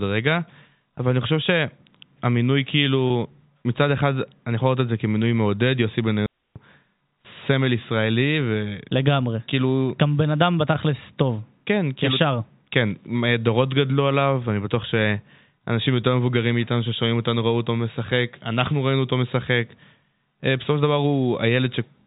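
At 3.08 to 3.10 s there is packet loss with pitch repetition. Roughly 20 ms of audio went missing, which fits a single lost packet. The receiver filled the gap by repeating the most recent pitch period, so the speech does not break. Instead it briefly stretches into a held, slightly buzzy tone before normal signal resumes. Because the gap is so short, the repeated cycle never fades to silence.

At 6.26 to 6.56 s a digital wireless dropout cuts the audio for about 297 ms. The link lost too much data to decode, and the receiver muted its output with a very fast fade rather than passing corrupted material. The result is a clean hole of near silence. No burst of noise, click or hiss comes before or after it. Sound simply stops and then restarts, against the narrowband, telephone-limited character of the G.711 A-law path carrying it.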